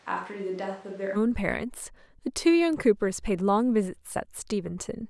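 From the start until 1.15 s the speech is roomy, hollow and bass-light, roughly 10 dB quieter over room noise about 25 dB down: a switch to a distant microphone, likely after the close one failed. The waveform jumps abruptly at 1.15 s; the spectrogram shows thin lows and a raised noise floor before it.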